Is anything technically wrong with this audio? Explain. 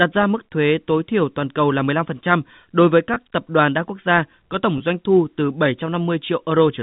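Yes. There are two packet loss with pitch repetition events, at 3.14 s after "đối với" and at 4.78 s after "quốc gia có tổng". Each 20 ms gap was bridged by repeating the last pitch period, which sounds like a briefly held, buzzy tone. The waveform shows identical repeated cycles, and the spectrogram shows momentarily frozen harmonic lines.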